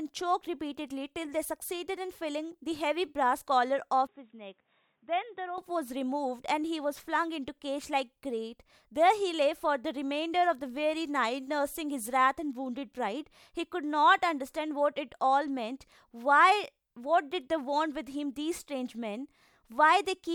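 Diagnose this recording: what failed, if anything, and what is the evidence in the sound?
Input switched to a poorer device, 4.07 to 5.58 s: the speech turns dull, with nothing above 3.8 kHz, drops about 10 dB with no gap, likely a driver-level device change.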